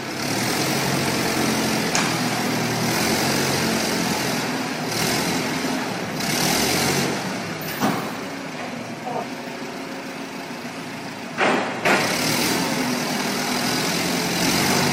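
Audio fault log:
No faults detected in this recording.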